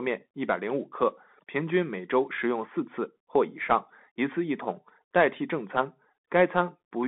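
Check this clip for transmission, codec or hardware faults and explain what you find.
One fault runs through the whole clip: Bluetooth CVSD headset codec damage. The speech is confined to roughly 150 Hz to 3.5 kHz, and a spectrogram shows a hard ceiling there with nothing above. CVSD encodes each sample as a single up-or-down bit, which fits a 64 kbps stream, and its adaptive step lags behind fast, loud high content. Sibilants turn scratchy, strong transients distort, and a granular hiss sits under the speech, visible as a grainy noise floor between syllables in the waveform.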